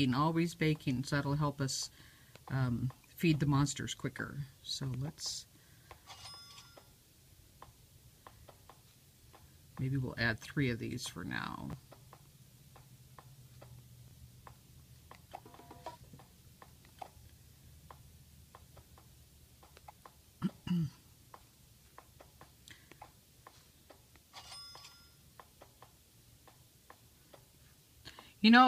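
At 11.71 to 11.73 s, chunks out of order: one 10 ms chunk plays one chunk late, after the piece that should follow it. At 14.08 to 14.12 s it happens again, with a 10 ms chunk arriving three chunks late. Nothing is missing. The order is wrong, leaving three hard joins each time. Each moment is heard as a brief jumbled stutter in the sound.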